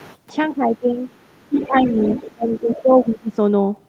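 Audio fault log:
0.0–2.81 s, other side's voice leaking through: the echo canceller likely failed to strip the loudspeaker's playback from the microphone, so a second voice surfaces at 0.0–0.17, 1.08–1.36, 1.57–2.34 and 2.54–2.81 s. It sits roughly 15 to 40 dB below the talker and is most prominent across 1.57–2.34 s.
0.5–3.38 s, speech suppressed in double talk: with both sides talking at once, the canceller likely could not separate the talker from the echo and turned both down. The voice dips by about 15 dB at 0.5–0.98 and 1.49–1.98 s, and by about 20 dB at 2.35–3.38 s.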